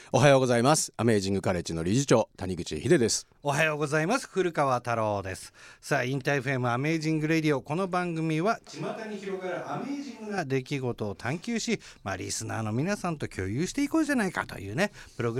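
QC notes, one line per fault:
8.67–10.38 s, switch to a distant microphone: speech abruptly turns roomy and thin, about 5 dB quieter, noise near 25 dB below speech; likely close-mic dropout. Spectrogram shows weakened lows, smeared reverb tails.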